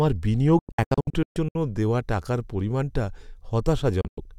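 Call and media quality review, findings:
Speech cut by a cluster of short silent holes, 0.59 to 1.56 s: about 0.54 s missing, scattered across 0.96 s, longest gap 128 ms, each mute with a fast 3 ms fade. Digital broadcast dropout, receiver muting on failed frames.

Second, shorter burst, 4.01 to 4.18 s: 128 ms lost over 160 ms, longest gap 96 ms. Same receiver mute mechanism. Gap sizes point to 32 ms frames being discarded.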